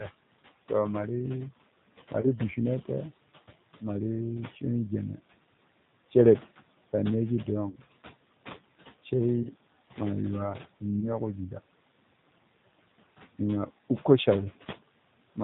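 From start to end, a noise suppressor cuts the room noise, which sits about 15 dB below the speech, by about 17 dB. The residue sinks between phrases. On a spectrogram the gaps show blotchy, flickering low-level speckle instead of an even noise floor.

Throughout, the speech passes through the G.729 codec at 8 kbit/s, and the damage is plainly audible. The sound is rough and synthetic, and nothing above 4 kHz passes. A spectrogram shows a hard ceiling at 4 kHz with smeared, blocky harmonics below it.

At 2.21–2.26 s, 7.70–7.76 s, 9.43–9.51 s, 11.00–11.09 s and 13.77 s, VoIP packet loss concealed by the speech codec replaces 20 ms of audio, and 40 ms at 7.70 s. The decoder extrapolates from its last pitch and filter into a fading buzzy tone or coloured noise. On a waveform this looks like a short, unnaturally regular stretch that shrinks, and the sound stays weak just after each one.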